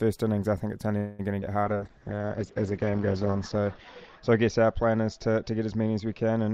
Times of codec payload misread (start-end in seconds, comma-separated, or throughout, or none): none